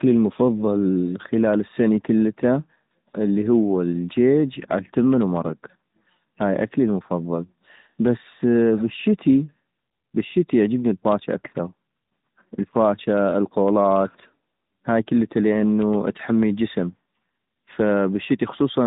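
Throughout, tandem speech coding re-encodes the speech twice, ending in what sounds like AMR-NB, leaving it rough, muffled and warbly, with nothing above 3.8 kHz.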